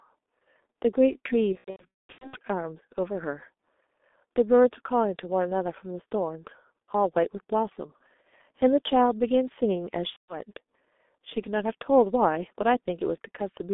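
Throughout, the G.723.1 codec confines the speech to about 250 Hz to 3.6 kHz at a rate fitting roughly 6 kbit/s, leaving it muffled and hoarse with smeared consonants. From 1.52 to 2.38 s, and again from 10.10 to 10.38 s, VoIP packet loss concealed by the speech codec turns the speech into fading buzzy, coloured tone. About 570 ms of the first stretch is lost, the longest gap being 210 ms; about 180 ms is lost in the second.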